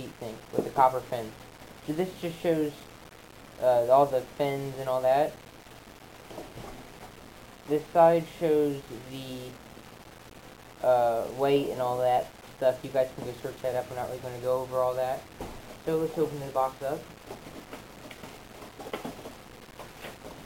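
From start to end, a grainy distortion follows the sound, sitting roughly 25 dB below it. The likely cause is low bit depth without dither. The audio was rounded to about 7 bits, so its error tracks the signal instead of forming smooth noise.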